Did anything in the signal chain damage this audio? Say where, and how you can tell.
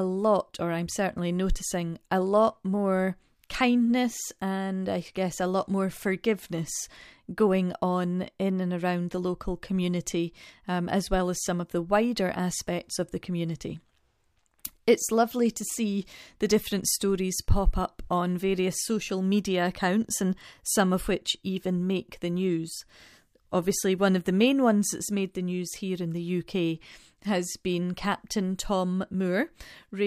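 No, none of the stages from capture to playback has left any audible damage on this speech recording.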